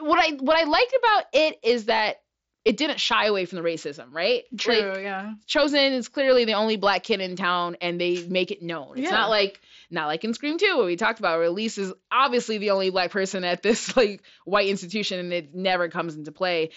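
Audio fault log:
Speech recording with no audible faults.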